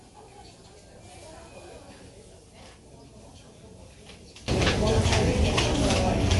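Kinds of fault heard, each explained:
MP3 compression: Throughout, the sound is watery and swirly, with nothing above 11.3 kHz. This is likely heavy MP3 encoding, which fits a rate around 48 kbps: short of bits, the encoder cut the treble and let weak frequency components flicker frame to frame.
One channel inverted: From 0.00 to 4.48 s, the mono sum drops by about 26 dB, leaving a faint residue. The likely cause is one stereo channel with reversed polarity, so material common to both channels cancels and only their difference remains.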